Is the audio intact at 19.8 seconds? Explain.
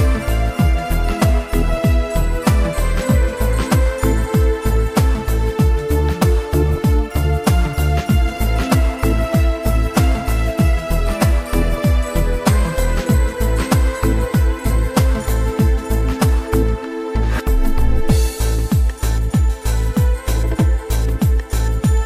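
No. At 19.8 seconds, as throughout the clip, a gritty, inharmonic fizz rides on the louder and brighter parts of the sound, sitting roughly 30 dB below it. This is crude rate conversion. Samples were simply picked or dropped to the nearest position, with no filtering. That fits a change from 48 kHz to 44.1 kHz. The timing error repeats in a fixed cycle and produces shifted, inharmonic copies of the audio.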